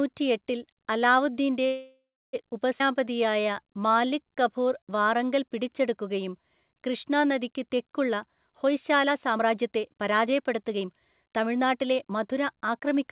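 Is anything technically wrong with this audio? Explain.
Yes. The speech has four timing faults.

From 1.66 to 2.35 s there is a call audio freeze. The last sound is stretched into a fading buzz, then about 0.32 s of silence. The likely cause is delayed packets draining the jitter buffer. Speech then resumes where it stopped, so 0.67 s of delay is inserted and nothing is lost.

At 2.8 s the audio skips ahead. Roughly 0.2 s of speech is dropped. The two sides are joined by only an 8 ms fill, so the speech jumps forward abruptly.

From 2.86 to 4.92 s the jitter buffer slows the speech down. It repeats single pitch periods again and again to rebuild its reserve. Playback runs at 90 percent speed and the pitch stays the same. Sounds are drawn out, adding 0.22 s.

From 8.52 to 12.96 s the jitter buffer speeds it up. Short pieces of one or a few pitch periods are cut out repeatedly to reduce the buffered delay. 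The speech plays at 114 percent, about 0.7 s shorter, and sounds hurried at the same pitch. Throughout, nothing is heard above 4 kHz, which fits a G.711 call codec.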